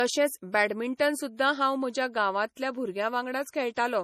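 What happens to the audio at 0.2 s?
At 0.2 s, as across the whole clip, the speech carries plainly audible damage, likely from MP3 compression at a low bitrate around 40 kbps. Starved of bits, the encoder drops weak frequency lines frame by frame, giving a watery, swirly sound. A spectrogram shows nothing above 15 kHz and flickering holes below.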